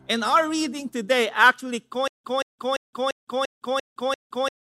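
From about 2.08 s right through to the end there's a stutter with silent gaps. A short burst of roughly 177 ms keeps coming back, seven times in all, each one followed by about 166 ms of dead digital silence, so it ticks along at a steady 344 ms cycle. That pattern likely means the playback or stream stalled and kept replaying its last fragment on each retry, so whatever should have followed is simply missing.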